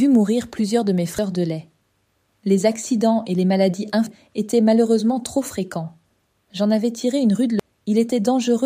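Right at 1.19 s there's a short glitch, and the same kind of blip turns up again at 4.07 s and 7.60 s. Those are the marks of damaged data in a compressed stream: bytes in the encoded file got lost or scrambled, so the decoder choked on those frames, lost sync and had to hunt for the next valid frame header. Each glitch is over almost instantly before the audio picks up again.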